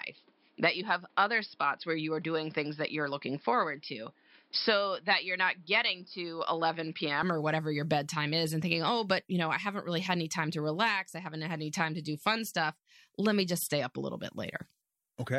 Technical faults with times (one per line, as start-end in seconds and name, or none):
0.00-7.23 input switched to a poorer device